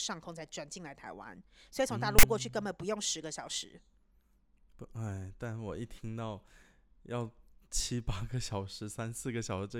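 Speech clip with file tags played as audio from 2.19 to 2.23 s: a hard-edged rasp, offset to one side, where tag text is read as samples, unlike symmetric full-scale noise from compressed data.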